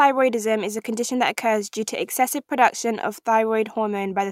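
No technical faults can be heard anywhere in the recording, so the speech signal reaches the listener intact.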